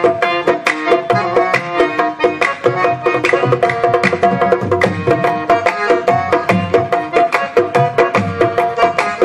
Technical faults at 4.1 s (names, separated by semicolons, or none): hard clipping